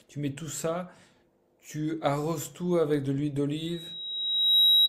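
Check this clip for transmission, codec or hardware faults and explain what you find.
Loudspeaker feedback squeal from 3.57 s to the end of the speech at 4.89 s. A microphone is picking up the loudspeaker it drives, and around 3.8 kHz the gain around that loop exceeds one, so that frequency keeps reinforcing itself on each pass. The tone swells over roughly a second into a steady, piercing whistle that ends up about 10 dB above the speech and is still sounding when the clip stops.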